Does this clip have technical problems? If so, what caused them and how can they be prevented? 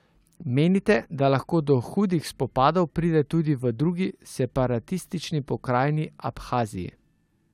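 No, there are no technical faults in this speech recording, so nothing needs preventing.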